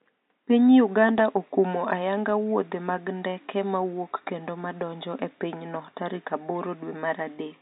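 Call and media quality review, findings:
No faults found: the speech signal is continuous and intact, with only the room's own background sitting about 49 dB below it.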